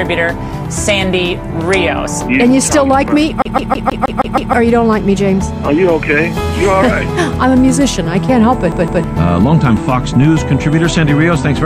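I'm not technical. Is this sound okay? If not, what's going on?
No. There is a CD stuck on one turn from 3.42 to 4.53 s and again from 8.72 to 9.04 s: a damaged spot keeps throwing the player back, so the same 0.16 s of sound repeats, seven times then twice, with a tiny gap at each jump.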